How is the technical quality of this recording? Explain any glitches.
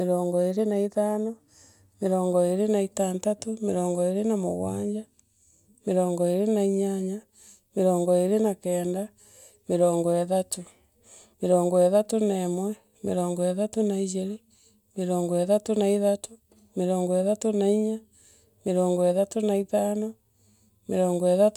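Nothing here calls for explanation, since there are no glitches anywhere in this recording of speech.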